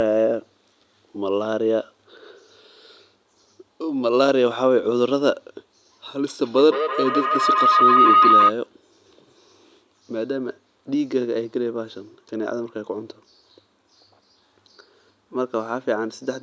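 At 6.44 s a feedback howl starts and runs until 8.57 s. Two devices in the same room share the call. Each trip from loudspeaker back into microphone comes back louder than the last. The repeats narrow to a tone near 1.5 kHz and pulse roughly every 150 ms. The howl peaks at about 5 dB above the speech. It then stops. The call's band-limited sound, with nothing above 8 kHz, sits beneath it throughout.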